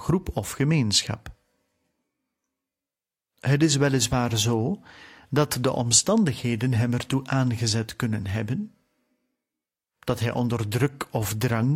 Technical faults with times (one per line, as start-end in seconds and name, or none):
none